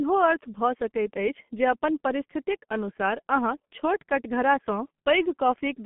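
Muffled, hoarse speech with blurred consonants throughout, heavy G.723.1 codec damage: a 150 Hz to 3.4 kHz telephone band, nothing above 3.6 kHz, fitting a 6.3 kbit/s rate.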